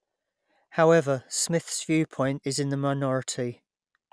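No technical faults can be heard anywhere in the recording. Nothing in the audio calls for a timestamp or an explanation.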